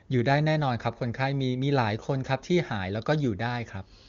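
No technical faults can be heard in this speech.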